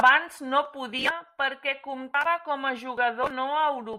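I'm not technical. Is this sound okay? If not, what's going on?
No, not quite. At about 1.09 seconds the speech suddenly drops noticeably quieter and stays that way to the end. That's a sudden gain jump: the volume changes in a single instant instead of easing down. The background hiss drops right along with the voice, which tells you it's the recording's level setting itself that changed. The likely cause is a digital volume adjustment applied abruptly, with no gradual fade.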